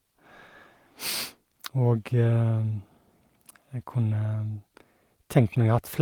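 No technical faults are audible.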